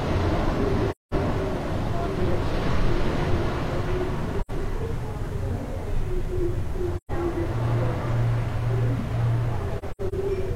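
A recording of sounds with AAC frame loss with muting. Soft-edged dropouts occur at 0.90–1.14 s, 4.40–4.51 s and 6.96–7.11 s. A scattered cluster at 9.78–10.14 s has gaps of up to about a tenth of a second. Lost frames were decoded as silence, and overlapping windows fade each hole in and out.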